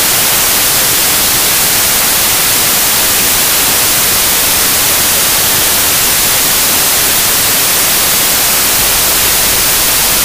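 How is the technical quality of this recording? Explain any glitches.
Poor: a wrong sample width corrupts the whole recording from start to finish. Data written as packed 24-bit integers is being read back as 32-bit integers, so each decoded sample takes four bytes that straddle two original samples. Most values mix bytes from neighbouring samples, and only some keep the true signal's top bits. The original sound is buried in loud noise, and because three stored samples are consumed as fewer, larger ones, it plays about 1.33 times too fast and too high in pitch.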